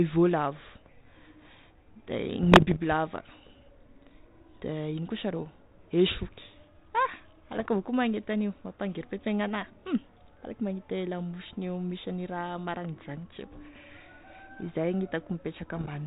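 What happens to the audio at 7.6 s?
Bit errors on an ADPCM link, 7.52 to 7.66 s: flipped bits knock the decoder's step size and predictor off, giving pops and rough bursts that ring on, rather than a clean dropout's gap.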